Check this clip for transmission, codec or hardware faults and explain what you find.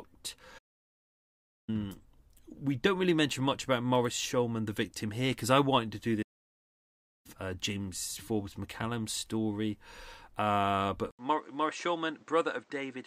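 Two playback stalls and one input switch are audible in this speech clip. The speech cuts out from 0.58 to 1.69 s, about 1.1 s, and again from 6.22 to 7.26 s, about 1.0 s, right after "I wanted to do". Each gap is likely a playback stall, where the player ran dry or its thread was blocked before output resumed.

At 11.11 s there is an 80 ms silence, after which the sound turns duller to the end. The level falls about 5 dB, and a new noise floor sits roughly 30 dB below the speech. This is likely an input switch to a poorer device with a narrower band.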